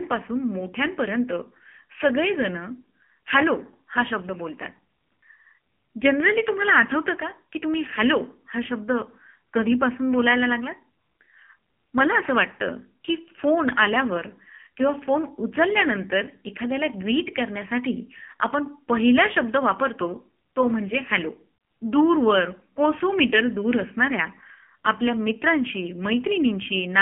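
Speech sounds buzzy, thin and synthetic throughout, confined to a phone band of roughly 200 Hz to 3.4 kHz. This is heavy AMR narrowband mobile codec damage: the voice is rebuilt from a pulse-driven vocal-tract model, and its coarseness fits a low 6.7 kbps mode.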